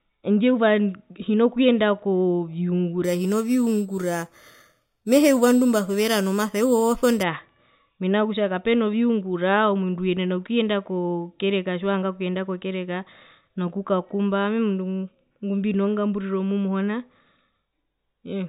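From 3.04 to 7.23 s the speech carries imaging from sample-and-hold upsampling. Each sample was simply repeated to raise the rate, with no smoothing filter, which fits an 8 kHz original brought up to 44.1 kHz. It sounds like a bright metallic fizz riding on the speech, about 18 dB below it. On a spectrogram, a mirrored copy of the speech band fills 4 to 8 kHz, its harmonics sloping opposite to the pitch. Zoomed in, the waveform shows staircase steps.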